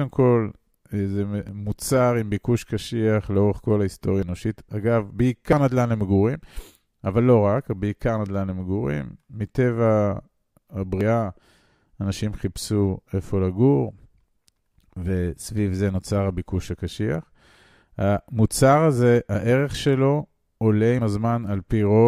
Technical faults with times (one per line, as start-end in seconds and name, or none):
1.49 dropped buffer (overrun)
4.23 dropped buffer (overrun)
5.53 dropped buffer (overrun)
11.01 dropped buffer (overrun)
20.99 dropped buffer (overrun)